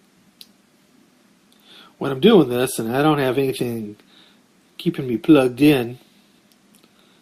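No technical faults are audible.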